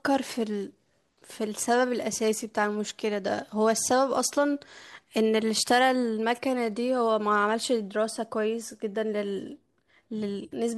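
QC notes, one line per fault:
No faults found in this speech clip. There is nothing to log against any time range.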